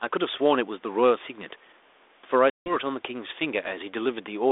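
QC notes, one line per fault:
2.5 to 2.77 s, packet loss on an ADPCM call: about 160 ms of the 32 kbit/s G.726 line drops to hard-edged silence, roughly seven packets' worth. When sound resumes it comes back slightly distorted, then settles within some tens of milliseconds. That rough re-entry sets it apart from a clean dropout: the decoder's adaptive predictor and step size lost step with the sender's and must re-converge.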